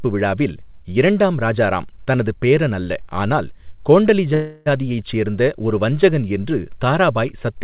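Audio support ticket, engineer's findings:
Call audio freeze at 4.34–4.68 s: a fading buzz fills 0.32 s, then speech picks up where it stopped with nothing lost. Likely delayed packets draining the jitter buffer.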